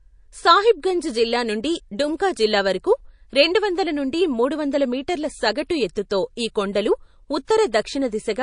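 Throughout the recording, the encoder is starved of bits, most likely from MP3 compression at a rate that points to around 40 kbps. With so little to spend, it cuts the treble and drops weaker frequency lines that switch on and off between frames. The speech sounds plainly watery and swirly, with metallic chirps on s sounds and softened consonant onsets.

Pre-echo appears three times. The coder keeps a block of about 52 ms for each sharp onset and does not switch to shorter blocks, so the quantisation noise meant for the attack spreads back into the silence before it. At 2.17 to 2.20 s, a 25 ms hiss about 13 dB above the floor comes before the attack. At 6.73 to 6.75 s, the hiss lasts 20 ms and rises about 10 dB. At 7.45 to 7.48 s, the worst one lasts 30 ms at about 17 dB, and each onset sounds smeared.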